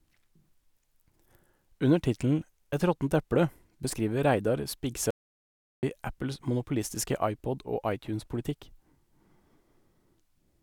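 A speech clip where the input likely dropped out, perhaps a lost link or stray mute, leaving an audio dropout to silence from 5.11 to 5.83 s: 0.72 s of dead silence, no room tone, that speech lost.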